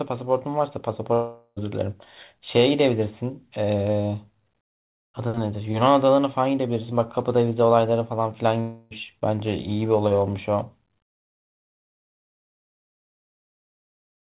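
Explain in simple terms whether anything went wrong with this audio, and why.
Two short gaps break the speech, at 1.14 to 1.58 s and 8.60 to 8.93 s. Each is a long network dropout: audio likely stopped arriving, so the receiver stretched the last sound into a fading buzz. The first gap ends in brief silence. About 0.4 s and 0.3 s are lost. The sound is phone-like throughout, since the call path carries nothing above 4 kHz.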